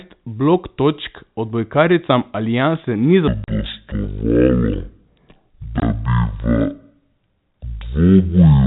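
From 3.28 s to the end, the speech suddenly drops deep and drags, running at half speed with the pitch sunk by roughly ten semitones, so everything after that point sounds slurred and heavy. Speed and pitch fall together in one step. This is a section at the wrong speed, likely caused by that stretch being played against a clock running at half the rate it was recorded at, rather than by any change in the talker.

Inside that slowed stretch there are two abrupt holes with hard edges: a longer one from 3.44 to 3.48 s lasting 40 ms, and a shorter one from 5.80 to 5.82 s lasting 20 ms. This is packet loss filled with silence. The receiver had nothing to play for those moments and inserted dead air. The 40 ms gap fits two lost 20 ms packets and the 20 ms gap fits one. The sudden cut to and from silence is what gives the holes their hard edges. The narrow, telephone-band character of the audio comes from G.711 coding, which adds at most faint damage of its own here.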